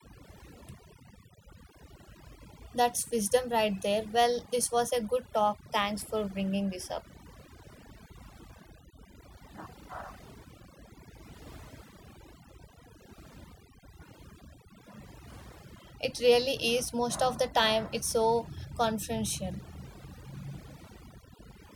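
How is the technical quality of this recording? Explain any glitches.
The quality is held back by one fault. Overdone noise removal runs throughout. Strong noise reduction suppresses bands near the noise level, leaving twinkling silence.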